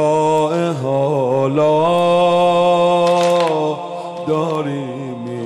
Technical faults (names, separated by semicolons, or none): bit error spike